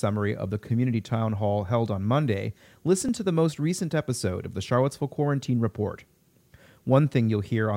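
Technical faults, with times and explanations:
1.09 s and 3.09 s, overlap between stream segments. Each time a tiny skip interrupts the speech. The first falls between "of the community" and "hall held on". The second comes just before "to the most recent". Two stream segments claimed overlapping time stamps, so the player cut about 18 ms of real speech. The waveform jumps across the gap. The faults sit 2 s apart, matching 2-second segments.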